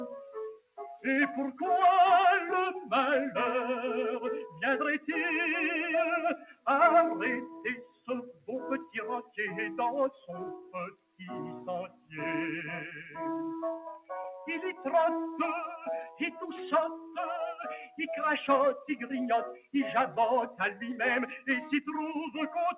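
A speech noise suppressor applied to music or sounds runs through the whole clip, treating sustained tones and decays as noise and pulling them down, so the level pumps by around 10 dB. Sound cut by the noise suppressor is clearest at 0.55–0.79, 6.37–6.67, 7.47–8.48, 8.85–9.38, 10.1–11.21, 11.88–12.14, 16.96–17.17 and 19.54–19.74 s, where held or fading sound sinks by about 14 to 21 dB, only about 8 dB at 16.96 s. The audio also has nothing above 4 kHz, which fits a narrowband call codec such as G.711.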